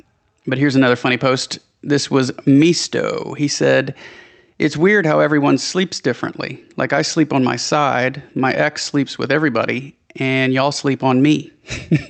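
Across the whole clip, the loud and soft passages sit unnaturally close together, and everything sounds squashed. This is gain pumping, with a swing of around 5 dB. The likely cause is input gain set far too high for the microphone, with a fast limiter or compressor clamping down on every loud sound and releasing in the pauses. The call path's low-pass near 8 kHz is also audible.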